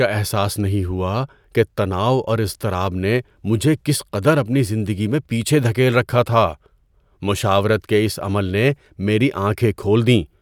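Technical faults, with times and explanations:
No technical faults can be heard in this recording.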